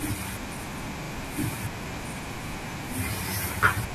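It's a short speech clip with one repeated buffer fault, running from about 1.04 to 1.12 s. The playback device didn't get fresh audio in time, so it replayed the piece it already had, twice over. You hear the same short slice three times in a row, with a hard join at each repeat, giving a quick stutter. Each repeat lasts about 40 ms, which fits a 40 ms buffer. Practically nothing gets dropped, so the speech just stalls briefly and carries on.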